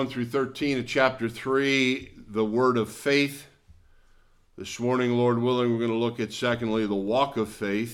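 Dropped samples at 7.08 s, heard as one sharp click near the end of the audio, a thin vertical line running across the whole spectrum at that instant. The likely cause is that a handful of samples, around a tenth of a millisecond, went missing from the stream, so the waveform leaps straight from one value to a later one. That gap is far too brief to remove any audible sound. Only the abrupt step is heard.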